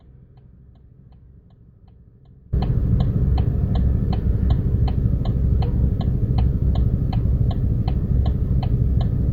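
Audio dropout to a faint residue, already under way at the start and lasting until 2.53 s: only a faint leak remains, far below normal level, until the sound returns abruptly, likely a lost signal on a still-live path.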